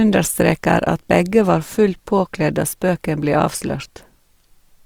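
Throughout, the speech is grainy and rough rather than MP3-swirly, still reaching 20.4 kHz: likely Opus compression, noise-filling starved bands at around 24 kbps.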